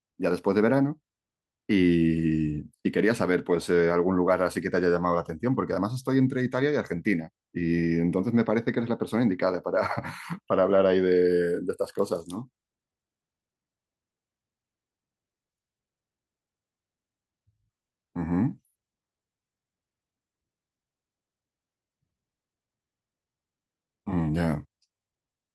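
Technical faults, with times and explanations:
No technical faults can be heard in this recording.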